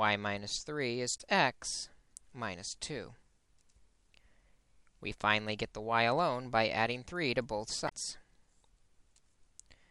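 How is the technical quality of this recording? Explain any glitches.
The recording has two short glitches, both from damaged data in a compressed stream. They occur from 1.14 to 1.21 s and from 7.85 to 7.92 s, each lasting under a tenth of a second. At both points corrupted bytes in the encoded stream mislead the decoder, which loses frame sync and hunts for the next valid header, producing a brief chirp or blip.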